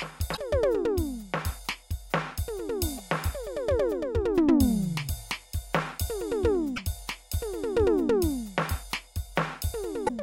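This music clip has damaged data in a compressed stream, heard as brief glitches at 0.33–0.38, 2.94–3.00, 6.73–6.79 and 10.05–10.10 s. Corrupted frames make the decoder misread them and hunt for sync.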